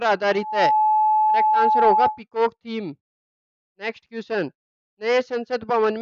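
The audio carries loudspeaker feedback squeal from 0.31 s to 2.21 s. A steady tone near 859 Hz swells up in about a third of a second and sits several decibels above the sound. A microphone is picking up its own loudspeaker, and the loop runs away at that one frequency.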